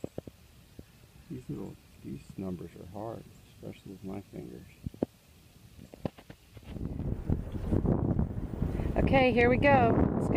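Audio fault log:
No technical fault can be heard in the signal at any point.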